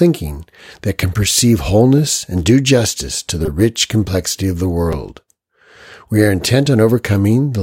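Repeated buffer at 3.46 to 3.48 s, between "do justice to the" and "rich complexity of the", and again at 4.93 s, just after "rich complexity of the", in this speech clip. Late audio made the device replay its last block, which fits a roughly 5 ms buffer. A tiny slice sounds several times over with hard joins, heard as a brief buzz rather than a stutter, and nothing seems to be skipped.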